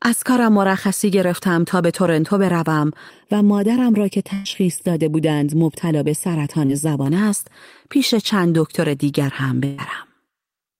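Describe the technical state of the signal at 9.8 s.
A burst of packet loss runs from 9.65 to 9.80 s, ending right at that moment. About 140 ms of speech never arrived, and the receiver stretched and faded the last sound to fill 131 ms. The result is a decaying buzz or hiss before the speech jumps ahead.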